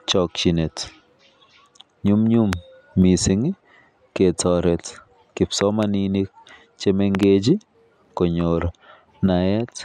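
A loud pop hits at 2.53 to 2.55 s, just before "mising ketaret". It stands about 20 dB above the speech. Two more events come as pairs of pops, at 5.61 to 5.85 s and at 7.15 to 7.25 s, each about 15 dB up. The likely cause is a sudden voltage pulse, such as a plug, a switch or static, entering the chain. Each is a sharp thump laid over the speech, which keeps going underneath.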